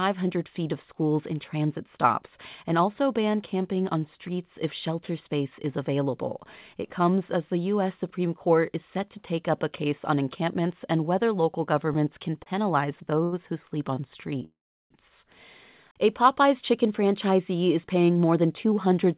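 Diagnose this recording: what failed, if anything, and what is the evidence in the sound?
Short stalls from late packets in the network jitter buffer at 12.43, 13.24 and 13.95 s: the sound is stretched briefly rather than cut, so nothing is lost.

A call audio freeze at 14.45 to 14.93 s, likely from packets held up in the network: the sound fades into about 0.36 s of silence, far longer than a stall.

A jitter buffer speed-up from 16.45 to 19.15 s: short pitch periods are trimmed, so the audio runs 8% fast at unchanged pitch, unlike a sample-rate error.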